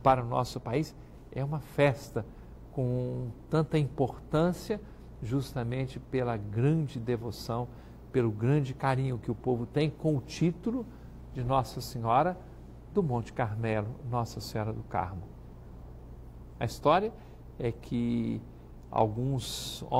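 Nothing stood out on listening; no technical fault could be heard anywhere in the recording.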